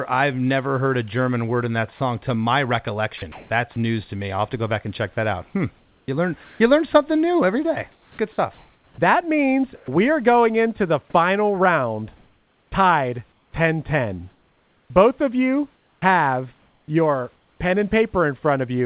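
From 1.96 to 3.76 s the speech is chopped by the voice detector. About 280 ms of quiet syllables and word edges turn into flat hiss. The likely cause is a sender detector switching transmission on and off repeatedly.

From 5.78 to 6.6 s, comfort noise replaces the background. The real room noise gives way to steady, featureless hiss. The sender has likely stopped sending during the pause, and the receiver is filling it with synthetic noise.

Inside that stretch, from 6.44 to 6.6 s, sound is dropped by the voice detector. About 110 ms of quiet speech vanishes into the hiss. The detector likely mistook it for background.

From 7.92 to 9.88 s the chopping returns. About 820 ms is replaced, and the speech stutters against the synthetic noise, likely from the same on-off switching.

From 12.16 to 16.02 s it is worse. About 1.6 s is lost to hiss, again likely from the detector toggling.

From 17.36 to 17.6 s, comfort noise again stands in for the background. 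It is about 4 dB quieter than the real room noise. A likely sending pause causes this too.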